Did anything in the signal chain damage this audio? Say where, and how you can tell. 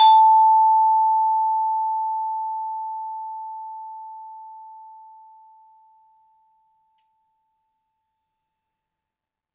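No, nothing in the signal chain has damaged this music. No stage of capture, conversion, transmission, storage or playback leaves an audible mark anywhere in the recording.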